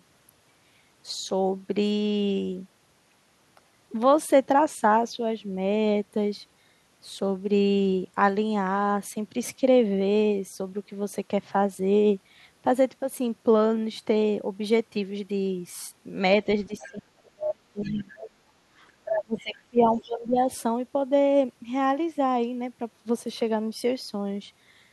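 A speech clip where the talker's level collapses from 16.67 to 18.52 s and again from 19.04 to 20.49 s, dropping by around 35 dB and then around 20 dB. This is speech suppressed in double talk, likely an echo canceller ducking the talker while the far end speaks, seen as hollowed envelope stretches. Brief fragments of the other side's voice leaking through appear at 16.79–16.98, 17.82–18.04, 18.88–18.92, 19.38–19.55 and 19.92–20.09 s, roughly 20 to 25 dB under the speech and the 18.88 s scrap far fainter. These are likely residual loudspeaker echo, showing as isolated harmonic traces.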